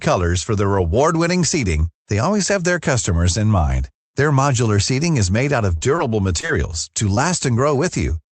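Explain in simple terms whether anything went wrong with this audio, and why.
Repeated packet loss (robotic sound) runs from 5.77 to 6.51 s, right after "made out of". Four small chunks of audio never arrived, the longest about 25 ms. Each hole was patched by stretching the previous sound, which makes the audio choppy.

A lost packet rebuilt from error correction happens at 6.97, 7.09 and 7.17 s. Each time, the next packet carried a rough backup copy, so nothing goes silent, but those moments sound grainier and noisier.

Short concealed packet loss hits from 7.14 to 7.19 s. About 20 ms went missing and was filled by continuing the last sound, leaving a brief smear or wobble.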